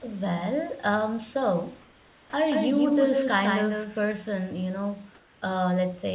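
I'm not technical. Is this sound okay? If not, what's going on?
No. The call system probably stopped sending sound during pauses and filled them with artificial hiss, called comfort noise in place of the background. The real room sound turns flat and slightly quieter from 1.82 to 2.33 s, after "um so", and from 5.15 to 5.42 s.

The system's speech detector likely reacted late at 2.31 s, causing an onset clipped by the voice detector. The next word starts abruptly, with its soft beginning missing.

From 2.52 to 4.00 s, starting just after "um so are" and ending before "you know", there is a doubled audio track, likely from the sound being captured twice. A slightly quieter copy trails about 150 ms behind, like a clean echo that starts and stops suddenly.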